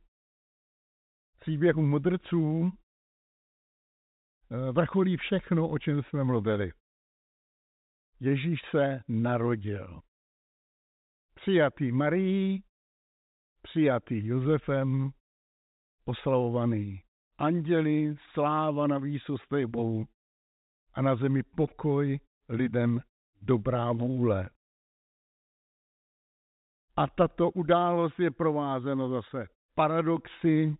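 No faults can be heard anywhere in this speech clip.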